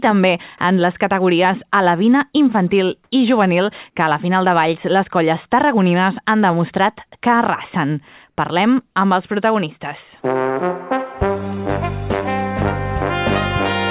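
Two short stretches of comfort noise in place of the background, at 3.04 to 3.12 s and at 8.30 to 8.38 s, each lasting 80 ms. In each, the real background, about 54 dB and about 48 dB below the loudest sound respectively, gives way to a flat, featureless hiss that differs in level by about 10 dB and about 5 dB. The likely cause is discontinuous transmission, with the receiver synthesising noise while the sender is silent. The audio carries nothing above 4 kHz, consistent with G.711 telephone-band coding.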